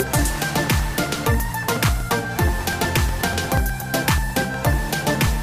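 A steady run of ticks sits under the sound from about 0.07 s to 5.27 s, one every 0.121 s, so roughly eight a second and about forty in all. That's periodic USB or driver dropouts: something stalls the audio path on a fixed cycle and a few milliseconds get skipped outright, leaving a clicky splice each time.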